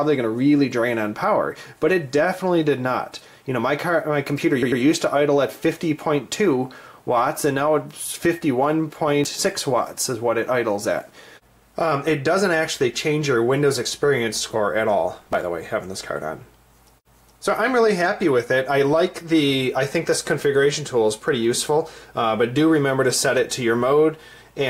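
At 4.62 to 4.82 s the sound stutters, a 96 ms stretch played twice more. This is repeated frames: the same compressed block was sent again, adding 192 ms. At 9.24 to 9.41 s and again at 15.17 to 15.43 s, a gritty burst of crackle tears through the audio. This is processor overload crackle: a dozen or more buffers of around 10 ms each missed their deadlines and were skipped, leaving hard-edged gaps.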